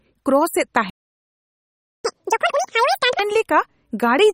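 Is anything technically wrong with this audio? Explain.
Yes, there are three problems here, one running the whole way through and two back to back in the middle.

The whole clip has plainly audible MP3 compression damage, most likely from a low-bitrate encode, something in the region of 32 kbps. Nothing comes through above 16 kHz, where the encoder has cut the top off, and weak frequency components flicker in and out between frames. That gives the speech a watery, swirly texture, with metallic chirpiness on the sibilants and smeared consonant attacks.

At 0.90 s there's a playback stall, where the audio simply stops dead until 2.05 s, a gap of about 1.15 s. The likely cause is the player running dry of data or having its thread blocked, so the output sat silent until it recovered.

Right after the stall, from 2.05 to 3.19 s, there's catch-up at higher speed. The player burns through its backlog at double speed by resampling, which raises the pitch along with the tempo, by about ten semitones. 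So the speech comes out fast and chipmunky for just over a second.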